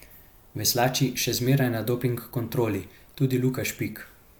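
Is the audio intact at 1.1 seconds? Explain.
Yes, at 1.1 seconds the speech plays through cleanly, with no dropout, click, distortion or other fault to be heard at that point.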